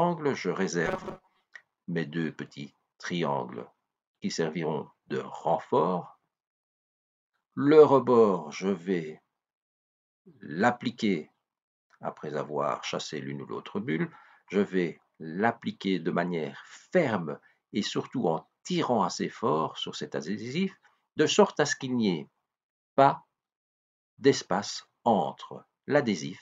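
From 0.86 to 1.45 s the sound turns into a rigid, metallic buzz, robotic sound from repeated short buffers, pitched at about 188 Hz. This is likely from fresh audio arriving too seldom, so playback loops a slice of roughly 5.3 ms and skips real material, with about half the passage made of repeats. On a waveform, identical short cycles stack end to end; a spectrogram shows evenly spaced horizontal bands at multiples of 188 Hz.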